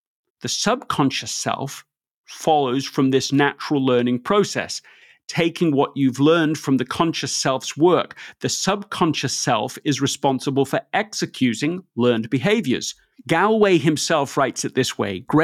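No audible faults turn up anywhere in the speech recording.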